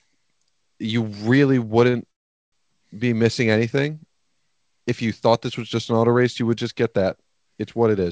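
At 1.90 s a short stall from a late packet holds the sound for about 32 ms, to 1.95 s. The packet missed its playout time, so the jitter buffer had nothing to play and the receiver drew out the last fragment until the packet arrived. Playback then resumed from the same point, so nothing is lost but everything after is 32 ms later. On a spectrogram this shows as a brief smear of flat, repeated harmonic bands where the speech should be changing. The waveform shows a short run of near-identical cycles.

From 2.11 s to 2.54 s a call audio freeze opens a gap of about 410 ms of silence. The likely cause is packets held up in transit, draining the jitter buffer. When they arrived, the speech picked up exactly where it had stopped, so nothing is missing, but the rest of the clip now runs about 0.41 s later. It is heard as a sudden dead pause in the middle of the speech. A spectrogram shows a blank vertical band across all frequencies, and the waveform drops to a flat line, in a clip whose energy stops at 8 kHz throughout, as the G.722 call path leaves it.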